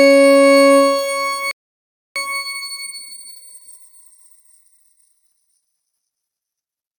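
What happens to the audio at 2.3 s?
A time-compressed catch-up runs from 2.16 to 3.44 s. After a stall, the player cuts and cross-fades small pieces, playing 1.5 times faster. Pitch stays normal.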